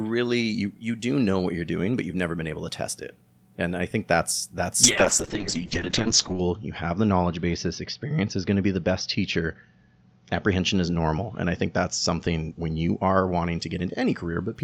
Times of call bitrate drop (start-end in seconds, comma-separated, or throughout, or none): 4.84-14.61